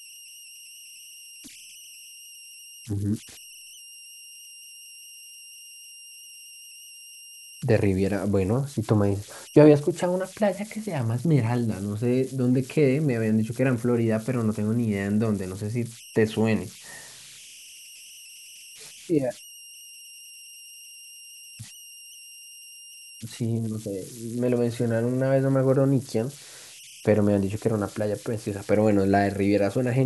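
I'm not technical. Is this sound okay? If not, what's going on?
No. Converter idle tones run through the whole speech clip. The converter lacks dither, so it makes a high whistle, around 3 kHz, plus grainy hiss.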